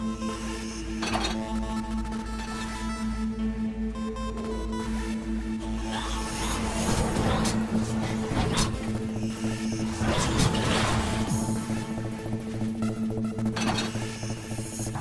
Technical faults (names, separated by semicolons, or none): wrong sample rate